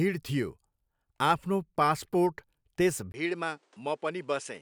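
Input switched to a poorer device, at 3.12 s and lasting to the end: the speech changes character abruptly after a 20 ms gap. From there nothing is heard above 10.5 kHz, so the sound turns duller. It also drops a few decibels in level and carries a faint new background noise well below the voice. The recording system likely swapped its microphone mid-take to a device with a narrower band, its own gain and its own noise floor.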